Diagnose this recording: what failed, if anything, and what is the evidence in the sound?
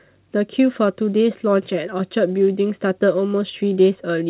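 Nothing failed: the speech comes through the WebRTC call path intact, with its content stopping at 4 kHz as a narrowband telephone codec such as G.711 A-law at 64 kbps would leave it, and nothing in the signal points to a breakdown at any stage.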